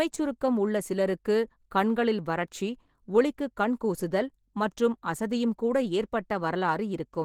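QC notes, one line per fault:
Throughout: Opus compression, speech plainly hoarse and grainy with rough, noisy highs reaching 20.2 kHz; likely Opus hybrid mode at a bitrate fitting about 16 kbps.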